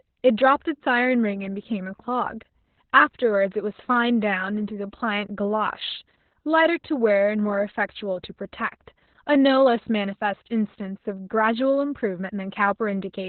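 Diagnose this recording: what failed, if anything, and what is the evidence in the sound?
The failure is at the codec stage: Opus voice compression, applied throughout the speech. Nothing is heard above about 4.3 kHz, so the band is cut to narrowband. The voice sounds muffled and hoarse, with a slightly robotic edge across the whole clip. The damage is heavy. That points to Opus running its SILK linear-prediction coder at a very low rate, which fits about 8 kbps. At that rate it discards the upper band and codes the excitation coarsely.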